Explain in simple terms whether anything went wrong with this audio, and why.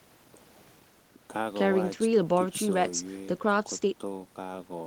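Nothing went wrong with this speech recording: the signal stays steady and intact throughout, with no dropouts, glitches or distortion to be heard at any point.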